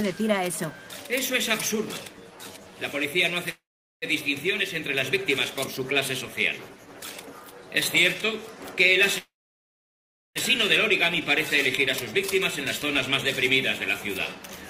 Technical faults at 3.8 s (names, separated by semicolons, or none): call audio freeze